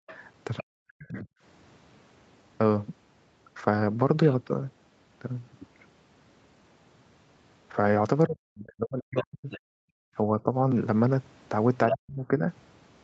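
At the very start, from 0.00 to 0.07 s, the room sound drops out almost completely, by about 40 dB, for a brief moment before returning. This is background gated by the echo canceller: with the loudspeaker active, the canceller clamped the microphone hard, then released it.

From 0.07 to 0.63 s a second, fainter voice sits under the talker, roughly 15 dB below. It is the other side's voice leaking through, likely playback from the loudspeaker that the echo canceller failed to subtract fully from the microphone.

Between 0.62 and 1.29 s the talker's voice sags and breaks up, losing up to around 40 dB in places. This is speech suppressed in double talk: with both sides talking, the canceller likely could not tell its own talker from the returning echo and turned everything down.

The same suppression returns for longer from 8.27 to 10.55 s, with the voice dipping and cutting out for well over a second in total. 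Within that stretch, the leaked far-end voice surfaces again from 9.16 to 9.60 s, roughly 15 dB down. From 9.78 to 10.08 s the background gating reappears, with the room tone falling by about 40 dB for a third of a second.

At 11.90 to 11.96 s a short scrap of the other side leaks in much louder, only about 5 dB below the talker. From 11.91 to 12.46 s the talker's speech is suppressed again, dropping sharply for about half a second.

The call's microphone processing is also audible, with nothing above 8 kHz.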